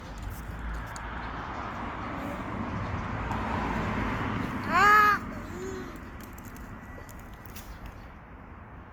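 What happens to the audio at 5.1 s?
At 5.1 s the everyday sounds carry generation loss, which runs through the whole clip rather than starting there. The texture is swirly and hollow, with attacks smeared, most likely from repeated lossy re-encoding, roughly five passes through a codec like Opus at around 48 kbit/s, each landing on a new frame grid so the errors pile up. The top end is not dulled, since content extends to about 20.3 kHz. What gives it away is the accumulated smear.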